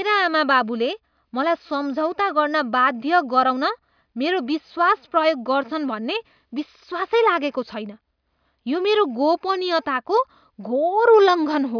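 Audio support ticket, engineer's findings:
No faults found on listening; no dropouts, glitches or level problems heard in the speech.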